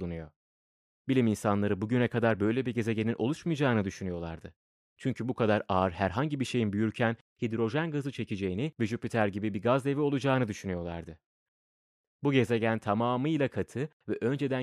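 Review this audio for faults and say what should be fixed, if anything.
No faults; nothing needs fixing.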